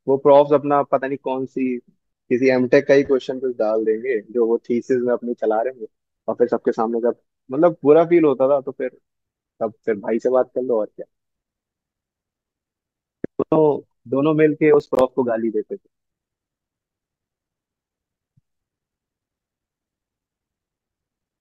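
From 14.80 to 15.01 s the speech breaks into a burst of processor overload crackle: around seven buffers of about 10 ms each miss their deadline and drop to silence, and the hard-edged gaps give a gritty tearing that stops once the load clears.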